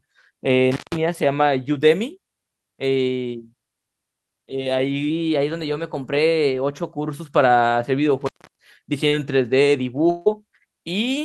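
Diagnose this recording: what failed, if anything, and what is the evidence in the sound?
Intermittent contact in the analogue wiring occurs twice. At 0.72–0.97 s the sound drops out for about 161 ms, and at 8.21–8.66 s for about 315 ms, each time with crackle at the break and remake. A loose plug or cable conductor opens the signal path, so the speech vanishes and only faint residual hiss remains until the contact closes again.

A drift correction step is heard from 5.10 to 7.15 s. The speech suddenly runs 5.6% fast and rises about 95 cents, close to a semitone. Speed and pitch move together, which points to a resampling rate change. The likely cause is clock-matching software in the driver or buffer stage altering playback rate in one jump to rebalance its buffer.

Short concealed packet loss sits in the network and codec path at 9.08–9.15 s. About 40 ms of audio never arrived in time, and the decoder extended the preceding sound to cover it before blending back into received audio. 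The result is a brief smeared, wobbling patch rather than a clean gap, the signature of packet loss concealment over a few hundredths of a second.

A lost packet rebuilt from error correction appears at 9.12–9.14 s and again at 10.26–10.28 s, each spanning 20 ms. No gap is heard because the following packet carried a low-bitrate Opus in-band FEC copy, which the decoder played in place of the lost frame. Those frames sound rougher and noisier than the surrounding speech.

A long network dropout runs from 10.10 to 10.29 s, with about 160 ms of audio lost. The receiver continued the last sound for roughly 157 ms as a fading extension, never reaching full silence, and then received audio resumed with the missing stretch simply gone. The likely cause is a burst of consecutive lost or late packets on the network.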